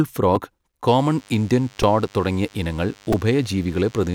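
A repeated buffer at 0.36 s makes a tiny click in the speech. Fresh audio failed to reach the output in time, so the device replayed its previous block once. Each block lasts about 2.67 ms, which fits a 128-sample buffer. The repeat sits where a few milliseconds of new speech should have been, and the hard joins at each end of the copied block produce the click.

DECT cordless phone buzz starts at 0.88 s and continues to the end. A DECT handset or base nearby transmits short radio bursts every 10 ms. The audio circuitry rectifies these bursts into the signal, producing a thin, steady 100 Hz buzz rich in harmonics. The buzz sits roughly 30 dB below the speech.

The repeated buffer returns at 1.82 s and 3.13 s, and these two are more severe than the first. Each time, the same 2.67 ms block plays four extra times in a row, replacing around 10 ms of speech. At this small block size the rapid repeats fuse into a brief buzzy stutter rather than distinct echoes, with sharp edges at every join.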